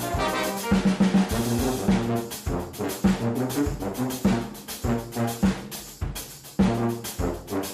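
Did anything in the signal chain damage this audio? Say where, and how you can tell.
No, nothing along the chain seems to have touched this one; it comes through intact with no stage leaving a mark you can hear.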